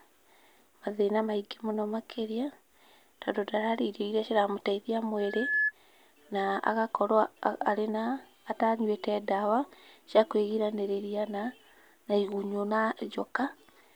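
Right after "iria ciramũteithia", at 5.17 s, you get loudspeaker feedback squeal. The mic is hearing its own loudspeaker, and at about 1.7 kHz the loop gain tips past one, so that tone feeds on itself. It swells over a bit under half a second into a thin, piercing whistle, ending up a few decibels louder than the speech, and it cuts off at 5.72 s.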